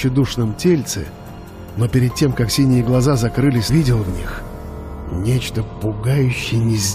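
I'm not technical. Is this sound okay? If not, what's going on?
No. At 3.68 s the sound jumps ahead with a small blip, likely a stream segment skipped: one chunk failed to load and playback moved past it.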